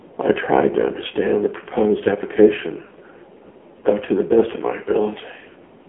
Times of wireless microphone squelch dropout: none

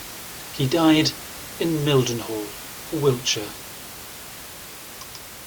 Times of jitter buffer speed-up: none

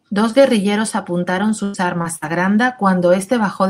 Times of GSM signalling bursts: none

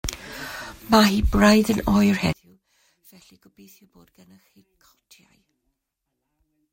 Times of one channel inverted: 2.33-6.73

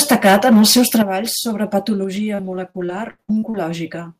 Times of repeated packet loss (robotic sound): 2.15-3.56

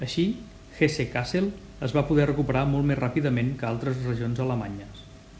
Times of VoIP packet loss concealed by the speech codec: none

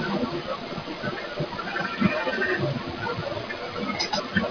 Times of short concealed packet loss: none

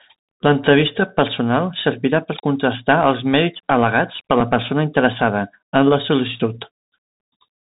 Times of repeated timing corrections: none

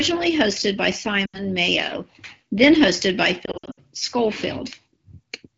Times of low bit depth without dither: none

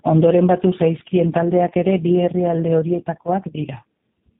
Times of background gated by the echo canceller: none

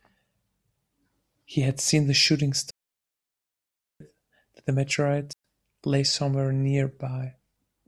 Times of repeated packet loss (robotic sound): none

